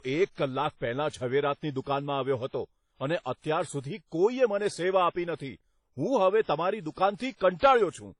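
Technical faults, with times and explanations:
Throughout, transcoding between lossy codecs: the speech has nothing above 10.6 kHz, and it carries a mix of different codec artefacts in a way that doesn't fit a single encoder. This likely comes from a low-bitrate WMA-style encode that was then re-encoded to HE-AAC. The second codec spends its limited bits on the first codec's flaws and adds its own. On a spectrogram, energy stops sharply at 10.6 kHz, with blotchy, patchy high bands below that ceiling.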